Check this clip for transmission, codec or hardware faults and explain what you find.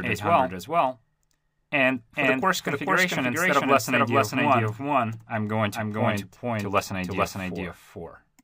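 One fault runs through the whole clip, a doubled audio track. Everything is heard twice, with a second full-band copy about as loud as the first trailing it by roughly 400 ms. The copy has no decay or room colour, so each sound is repeated cleanly rather than smeared by an echo tail. The likely cause is the same audio being mixed in twice, either captured again through a slower path or held as two out-of-step copies in an edit.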